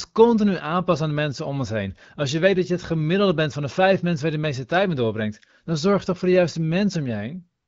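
No faults are audible anywhere in this recording.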